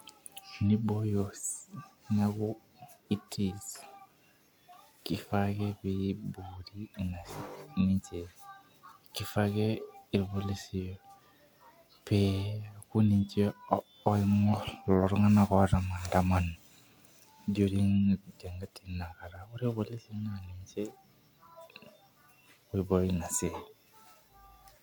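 No technical faults can be heard anywhere in the recording. There is nothing to place on a timeline or trace back to a cause.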